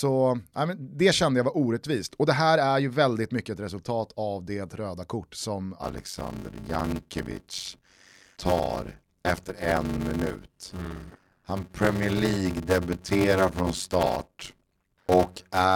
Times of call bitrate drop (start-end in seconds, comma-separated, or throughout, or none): none